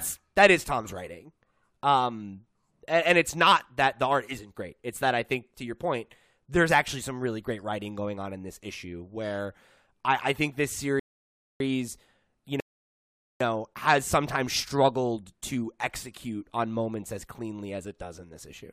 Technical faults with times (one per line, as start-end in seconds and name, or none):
11.00-11.60 rebuffering stall
12.60-13.40 rebuffering stall